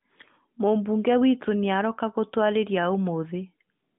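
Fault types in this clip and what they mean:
There are no fault types in this clip.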